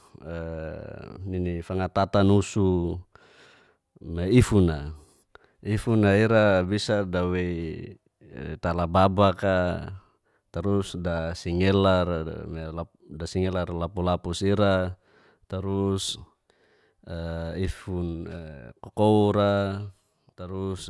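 Nothing stood out on listening to the speech here; no technical fault caught the ear at any point.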